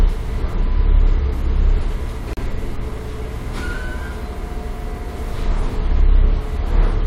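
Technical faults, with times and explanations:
2.33–2.37 s, gap at a join of encoded pieces: the sound drops out for about 38 ms and then resumes exactly where it left off, with nothing missing. This points to two separately encoded segments butted together without trimming. The first segment's padded final frame and the next segment's encoder start-up delay both survive as silence. The edges of the dropout are softened, since the codec blurs the transitions into and out of the silence.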